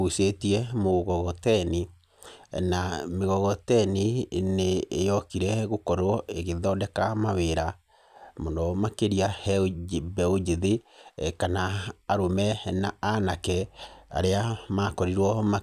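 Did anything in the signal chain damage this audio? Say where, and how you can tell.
No, nothing along the chain has left a mark I can hear on this recording of speech.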